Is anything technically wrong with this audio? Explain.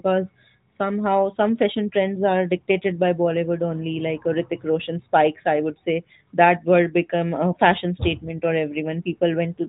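No, nothing here is technically wrong: the speech carries the expected narrowband, 4 kHz-capped character of an AMR-NB mobile path, with light coding texture consistent with its 12.2 kbps mode.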